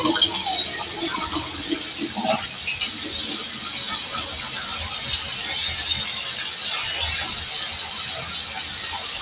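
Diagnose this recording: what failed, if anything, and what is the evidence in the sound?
Call processing fault: sound cut by the noise suppressor from 2.47 to 2.64 s. For roughly 150 ms the level sinks, by about 3 dB at its deepest, as the suppressor mistakes this sound for noise and turns it down, within a call path band-limited to 4 kHz.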